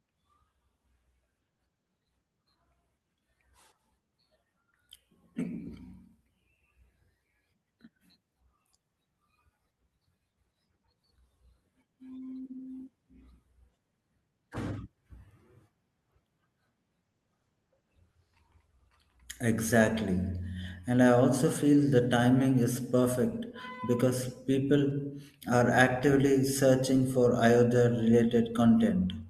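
From 17.03 to 20.23 s the speech turns rough and muffled, a call bitrate drop. The encoder appears to fall from about 32 kbps to 15 kbps for roughly 1.6 s, coding more coarsely and trimming the top end toward 12 kHz.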